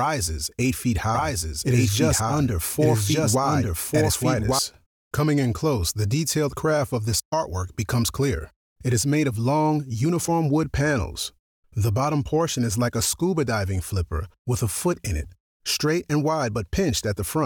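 From 1.15 to 4.59 s, a doubled audio track appears. A second copy trails about one second behind, equally loud. It likely comes from a slower capture path.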